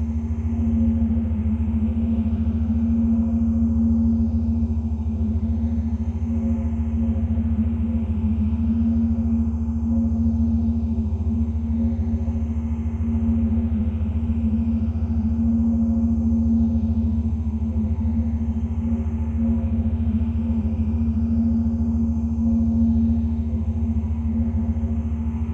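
No technical faults are audible.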